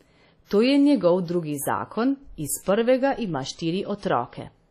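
Throughout, the speech has a ringing, washy smear and a hiss that breathes with the signal, with nothing above 14.6 kHz. That's likely WMA compression: heavy damage fitting a bitrate near 32 kbps, where long blocks smear quantisation noise and weak detail drops out.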